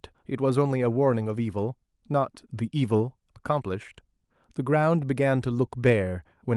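Nothing stood out on listening to this speech recording.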